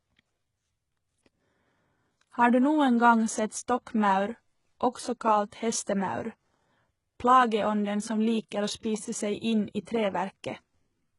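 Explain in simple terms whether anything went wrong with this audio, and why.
The speech sounds gritty and lispy on its s sounds from start to finish, likely from heavy HE-AAC compression faking the treble by copying lower sounds upward.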